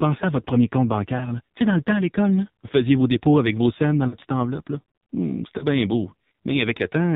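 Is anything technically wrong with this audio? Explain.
Yes. An AMR narrowband mobile codec runs throughout the clip, and three moments of lost AMR speech frames break up the speech.

The AMR narrowband mobile codec, present for the whole clip, rebuilds speech from a vocal-tract model and sparse pulses with nothing above 4 kHz. The result is heavily buzzy, muffled and synthetic, which fits a low bitrate of about 5.9 kbps.

Lost AMR speech frames occur at 1.18 to 1.27 s, after "à votre premier compte" and before "tu sais dans le"; at 4.08 to 4.16 s, after "avec vos scènes dans" and before "petite enveloppe"; and at 5.58 to 5.63 s, just before "bien beau". Each time the decoder repeats its last good settings at falling level, so the sound briefly dips and warbles. The first and last fit a single missing 20 ms frame, and the middle one fits about 40 ms lost.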